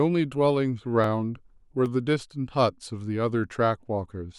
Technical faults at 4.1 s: none

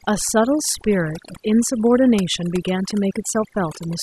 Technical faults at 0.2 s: overdone noise removal

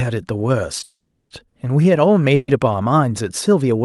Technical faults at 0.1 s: none

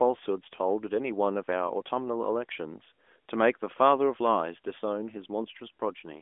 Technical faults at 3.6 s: none

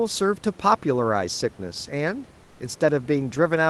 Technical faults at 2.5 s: comfort noise in place of the background

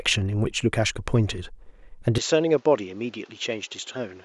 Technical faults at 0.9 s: none

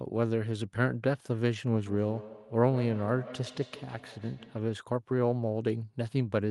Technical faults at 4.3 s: feedback echo between two devices

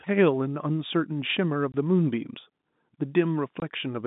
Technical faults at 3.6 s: packet loss filled with silence

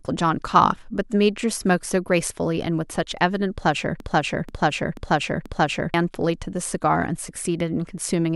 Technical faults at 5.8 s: broken-record loop

